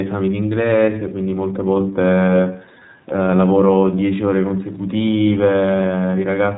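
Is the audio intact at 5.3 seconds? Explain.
No. At 5.3 seconds the speech carries iLBC codec damage, which runs through the whole clip. iLBC is a narrowband codec that encodes the excitation of each frame independently of the previous one. The frame structure here points to 30 ms frames, consistent with the 13.33 kbps mode. Nothing above 4 kHz survives. The codec damage is plainly audible, and the speech sounds a little rough and synthetic.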